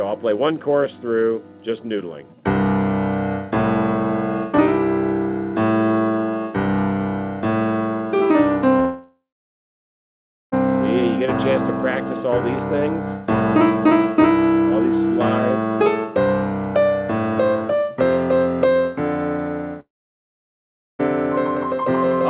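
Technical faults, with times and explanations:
8.8–10.55 s, long network dropout: about 1.7 s of audio likely never arrived; the receiver stretches the last sound into a fading buzz, then about 1.3 s of silence.
19.8–21.02 s, long network dropout: about 1.2 s is lost, likely to missing packets; the concealment fades almost at once, leaving roughly 1.1 s of silence before audio resumes.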